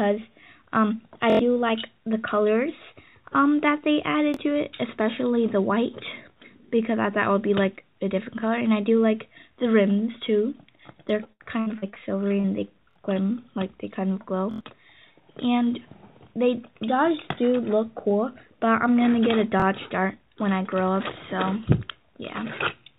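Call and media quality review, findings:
Repeated buffer, playout underrun: stutters at 1.30, 4.34, 12.91, 14.51 and 19.60 s. Each repeats the same 23 ms slice with a hard join at every repeat, which fits a 1024-sample device buffer. At 1.30 and 14.51 s the slice sounds five times in a row, a stutter covering about 100 ms of lost audio. At 12.91 s it sounds three times. At 4.34 and 19.60 s there is a single repeat, heard as a brief stutter. Probable component is the playback device, with new audio late to arrive and the last buffer replayed instead.

Repeated packet loss (robotic sound): choppy stretch from 11.24 to 12.46 s, on audio already band-limited to 4 kHz by the G.711 call path. There are eight gaps, the longest 72 ms, and about a quarter of the span is concealed. Probable component is network delivery into the jitter buffer. Lost or late packets are patched by extending the last sound, and the next hole follows before the sound recovers.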